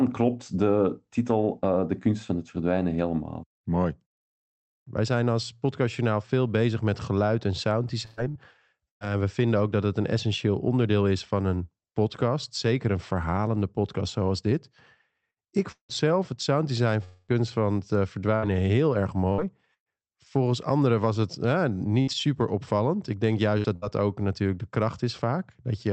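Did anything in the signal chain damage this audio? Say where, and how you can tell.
Yes. Repeated packet loss on the network at 8.05–9.04, 15.31–15.98, 18.36–19.89 and 22.02–23.85 s: each gap is patched by stretching the previous sound, so speech turns choppy and robotic.

From 17.04 to 17.31 s, between "het sounddesign" and "van het eh", 240 ms is missing, likely a long network dropout, covered by a fading buzzy or hissy continuation.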